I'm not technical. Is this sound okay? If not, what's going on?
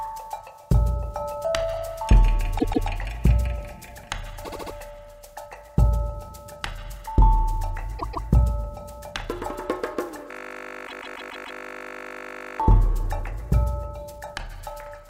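No. Two kinds of fault are audible.

Repeated frames: at four points, a small chunk of the stored sound was saved or sent more than once, so the player plays it again before moving on. You hear a brief stutter, like a skip on a scratched CD, sometimes with a soft blip. At 2.58 s and 7.98 s, a piece about 0.14 s long plays twice extra. At 4.43 s, a shorter 0.07 s piece repeats four extra times. At 10.86 s, a 0.14 s piece repeats five extra times, adding about 0.7 s. Each of these stretches the sound slightly.

System hang loop: from 10.31 s to 12.60 s, the computer froze while its sound hardware kept replaying the last tiny bit of audio it had. That bit is only 20 ms long, so repeating it 50 times a second turns it into a steady, flat buzz lasting over two seconds, instead of the real sound moving forward. The repeated-frames stutter at 10.86 s falls inside this buzz.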